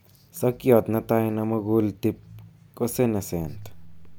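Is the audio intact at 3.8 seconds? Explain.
No. A DC step at 3.42 s shifts the waveform's zero line by about -39 dBFS and holds it to the end, heard as a low thump.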